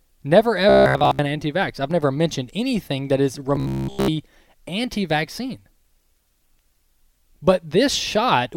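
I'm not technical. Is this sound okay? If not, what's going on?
No. From 0.69 to 1.22 s, and again from 3.56 to 4.08 s, the speech turns into a flat, metallic buzz at about 67 Hz. This is robotic sound from repeated short buffers. Audio likely arrived too slowly, so tiny 15 ms slices were replayed in place of the real sound.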